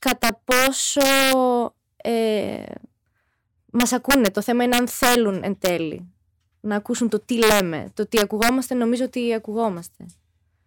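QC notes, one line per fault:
0.07–1.33 s, integer overflow: loud speech peaks driven about 4 dB past full scale wrap to the opposite sign, giving violent cracks far harsher than flat-topped clipping.
3.80–4.27 s, integer overflow: about 2 dB of overdrive makes peaks flip across the whole range, heard as sharp snapping bursts rather than clipping's dull buzz.
4.73–5.15 s, integer overflow: right after "θέμα είναι", peaks about 4 dB too hot wrap around instead of being limited, producing harsh cracking on the loudest syllables.
5.65 s, integer overflow: brief cracking where peaks only about 1 dB over the limit jump to the opposite extreme.
7.43–7.60 s, integer overflow: after "να ακούσουν το τι", about 5 dB of overdrive wraps peaks to full opposite sign, heard as violent cracks, sharper than clipping.
8.17–8.49 s, integer overflow: just before "νομίζω ότι", peaks about 4 dB over full scale flip polarity instead of saturating, causing loud cracks unlike clipping's softer flattening.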